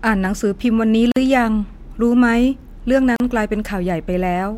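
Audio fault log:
1.12–1.16 s and 3.16–3.20 s, gap at a join of encoded pieces: the speech was encoded in separately processed chunks about 2 s apart and joined untrimmed, so each chunk's start delay and padded final frame remain. Gaps of about 47 ms and 38 ms interrupt the speech with smeared edges before it resumes where it stopped.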